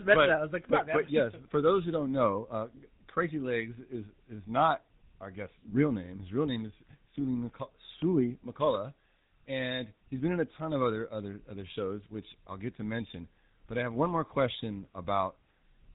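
From start to finish the speech carries a buzzy, gravelly roughness, with nothing above 4 kHz. That is GSM full-rate codec damage: the vocal tract is modelled and driven by regularly spaced pulses from a thinned excitation, at a rate that fits 13 kbps.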